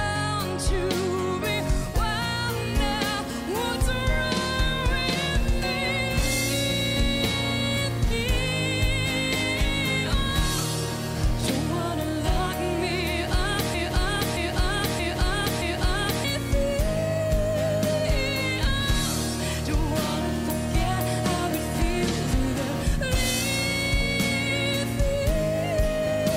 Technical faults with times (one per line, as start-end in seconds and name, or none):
2.08-26.36 video or display buzz
13.74-16.24 broken-record loop